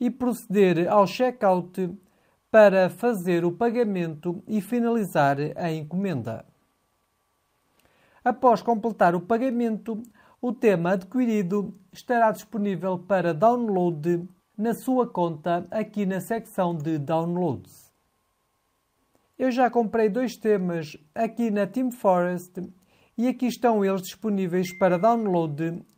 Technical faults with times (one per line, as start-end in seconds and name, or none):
none